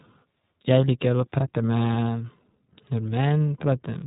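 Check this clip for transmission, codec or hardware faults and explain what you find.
There's one fault, and it runs the whole length of the speech: iLBC codec damage, and it's plainly audible. The top end stops dead at about 3.8 kHz, so everything sounds boxed-in and telephone-like. iLBC codes each short frame's excitation independently of the one before, and the texture here fits 20 ms frames at the 15.2 kbps mode. That frame-by-frame coding leaves the speech clear but slightly rough and synthetic.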